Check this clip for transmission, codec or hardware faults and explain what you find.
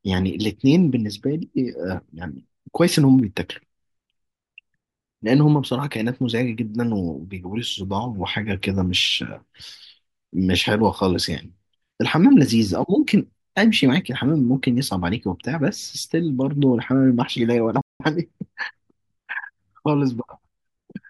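One fault is present, a playback stall from 17.81 to 18.00 s. The player likely ran short of buffered data or had its output thread blocked, so it sent nothing for about 190 ms. The speech cuts out in mid-flow into silence, then resumes.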